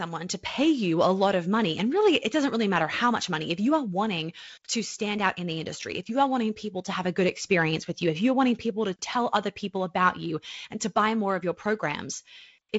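No technical faults can be heard in the speech. The sound stops at about 7.7 kHz and carries a faint hiss and slight graininess, which fits G.722 wideband telephone coding at 48 kbit/s.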